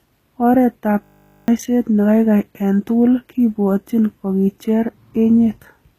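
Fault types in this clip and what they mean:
HE-AAC compression: the treble sounds synthetic, with s sounds turning gritty and lispy, and nothing at all above 14.9 kHz. This is likely low-bitrate HE-AAC, which codes the lower spectrum and rebuilds the top by copying lower bands upward under a coarse envelope.
System hang loop: from 1.04 to 1.48 s the sound collapses into a steady 50 Hz buzz, a single 20 ms slice repeated 22 times. The system froze while the audio hardware kept replaying one buffer, so roughly 400 ms of real audio never played.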